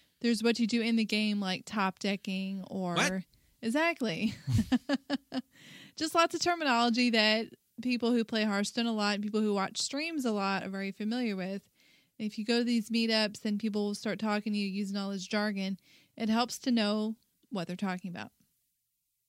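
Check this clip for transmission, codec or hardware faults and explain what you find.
Listening through the speech, I find no transmission, codec or hardware fault anywhere in the recording. There is nothing to report.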